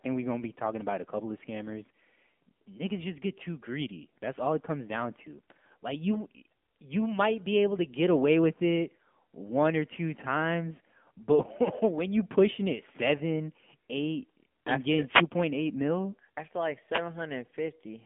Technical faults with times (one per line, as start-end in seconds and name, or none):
0.00-18.05 AMR narrowband mobile codec
15.06-15.27 wireless microphone noise hit
16.90-17.03 wireless microphone noise hit